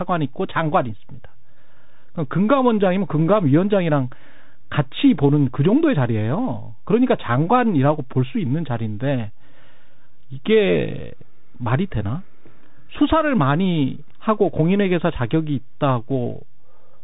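A constant DC offset shifts the whole speech waveform off zero throughout, eating headroom and leaving steady energy at the very bottom of the spectrum, though it isn't heard directly. The Bluetooth CVSD headset codec, whose one-bit adaptive steps fit a 64 kbps stream, cuts everything above 3.8 kHz, so the speech turns narrow and muffled, with scratchy s sounds, distortion on loud high sounds, and a granular hiss underneath.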